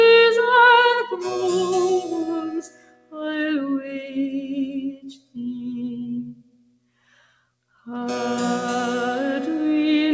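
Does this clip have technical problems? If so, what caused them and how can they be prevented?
Yes. Throughout, the level pumps and thins as held sounds and tails sink by around 15 dB while attacks survive. This is a noise suppressor applied to music or sounds: a speech-tuned suppressor was left active and treats sustained content as noise. Disable noise suppression, or use a music mode, whenever non-speech audio is sent.

Sound is cut by the noise suppressor at 2.58–3.21 s (about 17 dB down), 3.81–4.16 s (about 6 dB), 4.89–5.38 s (about 16 dB) and 5.98–7.35 s (about 17 dB). Steady or decaying passages sink, and their endings are cut short. Turning the suppressor off for this material prevents these drops as well.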